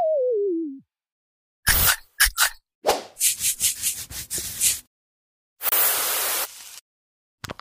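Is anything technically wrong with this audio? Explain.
Yes. At 5.69 s the sound cuts to silence for about 30 ms and resumes at 5.72 s, which points most likely to a Bluetooth stall: radio interference delayed packets, the headphones' buffer emptied, and playback halted until the retransmitted data arrived. Unlike a clipped edit or a codec glitch, there is no smear or warbling filler across the gap, only a clean hole of silence before the audio carries on.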